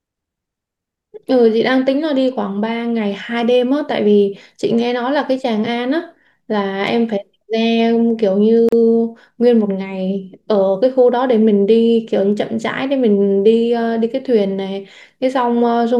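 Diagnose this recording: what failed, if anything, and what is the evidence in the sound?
The failure sits at the codec stage: the speech was encoded in separate pieces and then joined without trimming, so one run's trailing frame padding and the next run's start-up delay both survive as a gap at a join of encoded pieces. It shows up from 8.69 to 8.72 s as a silence of about 37 ms cutting into continuous speech, with its edges smeared by the codec, after which the sound resumes exactly where it stopped.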